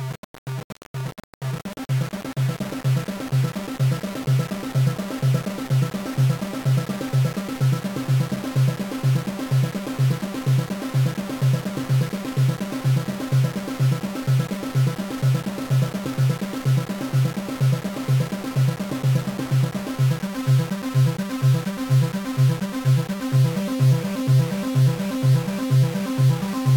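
From start to finish there's a grainy, signal-following distortion, with quiet passages sputtering or dropping out, likely low bit depth without dither, around 4 bits rounded, noise only about 15 dB down.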